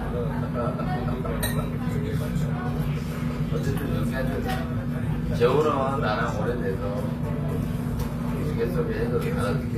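HE-AAC compression runs throughout the clip. Its treble is likely rebuilt from copied lower bands, leaving high detail gritty and metallic, which fits a 24 kbps bitrate.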